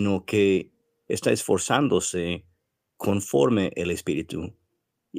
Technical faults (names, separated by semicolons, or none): none